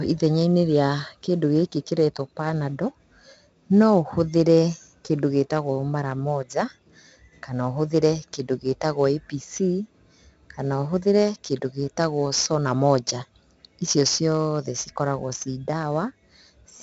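Speech with 4-bit ADPCM compression throughout: gritty hiss riding every loud syllable, a hard ceiling near 7.8 kHz, consistent with a roughly 64 kbps stream.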